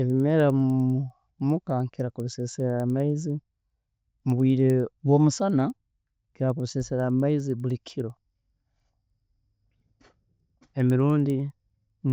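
Throughout the speech, a tick recurs ten times a second: the resampler restarted on every block, converting each 100 ms block from 16 kHz to 48 kHz without its neighbours' samples. A spectrogram shows thin vertical lines every 100 ms during speech, absent in pauses.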